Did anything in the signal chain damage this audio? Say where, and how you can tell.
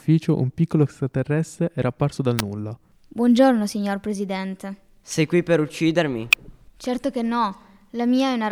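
Yes, in the analogue wiring: electrical switching spikes, likely a nearby switch arcing into the line, add sharp snaps at 2.39 s after "extraterrestre era apparso dal" and 6.33 s after "qui per uccidermi".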